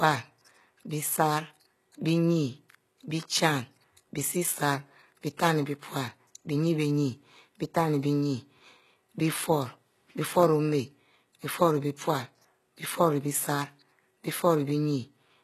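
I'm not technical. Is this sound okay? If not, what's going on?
No. HE-AAC compression is likely, throughout: treble above about 12.3 kHz is gone, and the remaining highs are copied up from lower tones, making s sounds gritty and metallic.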